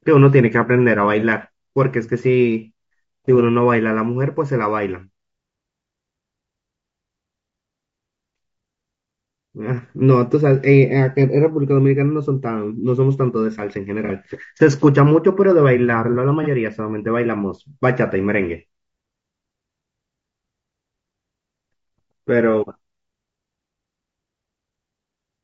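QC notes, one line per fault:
Throughout: low-delay AAC compression. The speech has a plainly audible rough, grainy texture, with noise sitting between the pitch harmonics and a thin, somewhat synthetic top band. This is likely AAC-ELD at a low bitrate, which fits about 32 kbps. Its very short frames resolve harmonics poorly. That sets it apart from the isolated patches below and from ordinary broadband noise.
14.06–14.10 s and 16.43–16.48 s: AAC frame loss with concealment. Each event is a brief smeared, noisy or phasey blip of about 30 ms, which fits a single lost frame. In each case the decoder rebuilt the missing stretch from the last good spectrum, so the sound briefly blurs instead of dropping out. The level and surrounding texture continue through the gap. That distinguishes it from a hard dropout or a click, and from the steady grain of the compression.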